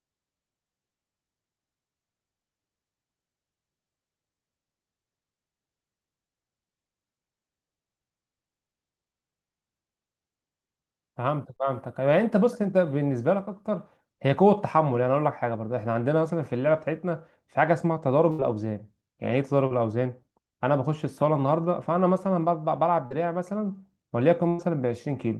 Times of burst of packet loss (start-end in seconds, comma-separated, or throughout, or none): 18.31-18.41, 24.49-24.60